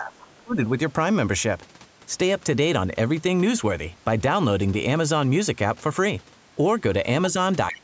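A speech recording passed through call microphone processing, with nothing above 8 kHz. At 0.00 to 0.58 s the voice sinks by as much as about 30 dB, for roughly half a second in total. At 7.71 s to the end it dips again, by about 20 dB. This is speech suppressed in double talk. Both ends were likely talking at once, so the echo canceller turned everything down. A faint second voice also leaks through at 0.20 to 0.24 s, about 25 dB below the speech. It returns at 7.73 to 7.79 s, louder, about 15 dB below. This is the other side's voice leaking through. The loudspeaker echo was likely not fully removed from the microphone.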